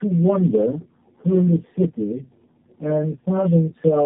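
The speech suffers from tandem speech coding throughout. It is band-limited with nothing above 3.7 kHz, and it is rougher, more muffled and more warbly than a single narrowband codec would leave it. The sound points to about three low-rate speech coders in series, each re-encoding the previous one's already degraded output. That compounding separates it from a single low-bitrate pass, which sounds muffled but not this smeared and watery.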